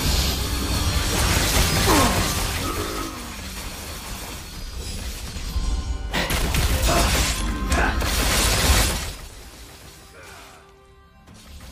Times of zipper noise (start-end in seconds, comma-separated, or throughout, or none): 5.20-5.67, 8.82-9.29